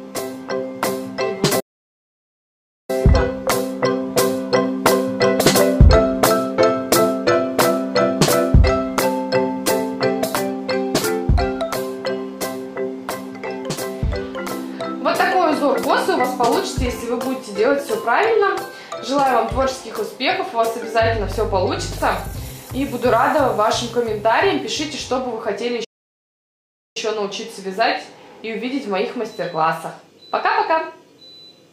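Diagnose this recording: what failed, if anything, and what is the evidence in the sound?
Playback stall: audio drops out at 1.60–2.90 s and 25.84–26.97 s as a flat waveform and blank spectrogram gap, likely from a starved or blocked player.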